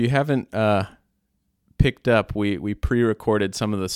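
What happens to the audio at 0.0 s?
Nothing goes wrong at 0.0 s; the audio is intact there, with no fault at that moment.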